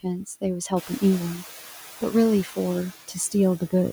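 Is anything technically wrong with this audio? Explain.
Yes. Noise suppressor artifacts run through the whole speech clip. The suppressor estimates the steady background frame by frame and pulls those bands down, here by about 6 dB. The residue dips between words and swells under them. On a spectrogram the noise floor looks blotchy and gated, with isolated time-frequency specks flickering on and off instead of forming a smooth, even haze.

Speech cut by the noise suppressor happens twice, from 0.69 to 1.03 s and again from 1.35 to 1.48 s. In each stretch about a tenth of a second of actual speech is affected. The suppressor misread low-level speech energy as noise and attenuated it, by up to about 14 dB in the first stretch and about 7 dB in the second. Quiet consonants and word tails sound swallowed or faded. A spectrogram shows speech bands, especially the weak high-frequency consonant energy, abruptly dimmed. 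The waveform envelope sags where it should hold.

Noise suppressor catching up runs from 0.76 to 1.35 s. Around 1.0 s the room noise, which belongs to the recording, jumps by about 12 dB and then sits about 18 dB below the speech. The noise estimate trails that jump and takes 590 ms to settle, so the louder background first comes through with less reduction and then sinks toward the roughly 6 dB cut. On a spectrogram the broadband floor brightens suddenly and then fades over that half-second. The waveform's baseline thickens and then gradually thins.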